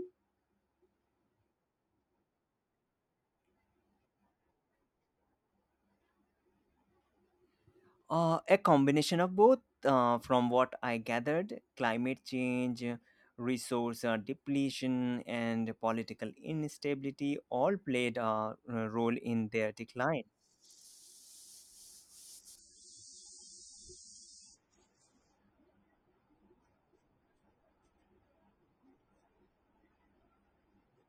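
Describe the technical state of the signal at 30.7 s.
At 30.7 s the adaptive stream is at a lower bitrate (22.59 s to the end). The quality drops abruptly to roughly a 24 kbit/s MP3 with nothing above 9 kHz, and there is no gap, unlike a dropout.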